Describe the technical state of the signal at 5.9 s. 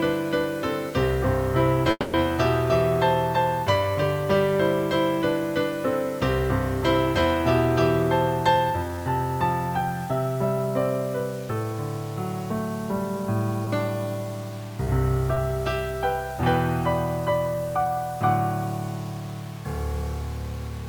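At 5.9 s, as throughout, low bit depth without dither adds grain that tracks the signal, likely from 6-bit truncation. The waveform looks stepped, and the spectrogram shows broadband noise roughly 25 dB below the signal.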